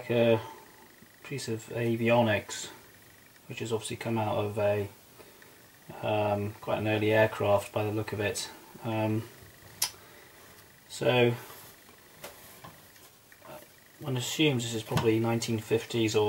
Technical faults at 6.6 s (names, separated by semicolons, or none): none